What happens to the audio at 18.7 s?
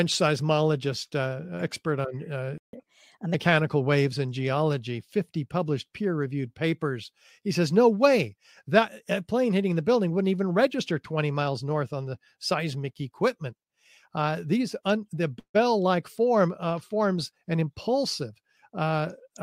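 Nothing goes wrong at 18.7 s: the speech there carries on intact, with no dropout, click, distortion or other fault.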